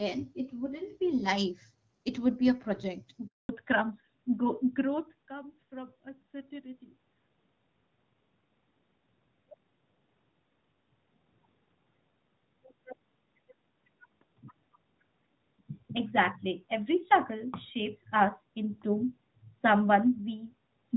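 At 3.27 s the speech cuts out abruptly, fading within a few tens of milliseconds, and stays silent for 220 ms until 3.49 s, when it resumes. This is a handover gap: the call was passed from one network to another, and no speech frames arrived while the link was being switched, so whatever was said during that fifth of a second is simply gone rather than muffled or garbled.

From 3.49 s to the end, the speech sounds duller and rougher, losing the crisp sibilance and airiness it had at the start. This is a fallback to narrowband. Before the handover the call ran on the wideband HD Voice codec, which fits a 12.65 kbit/s AMR-WB stream. Afterwards it switched to an older narrowband codec, likely AMR-NB, which removes everything above 4 kHz.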